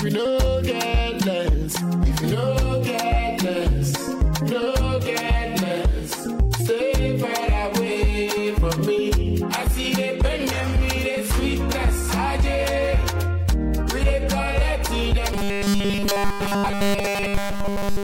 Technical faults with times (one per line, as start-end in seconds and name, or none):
15.33-18.03 robotic sound from repeated short buffers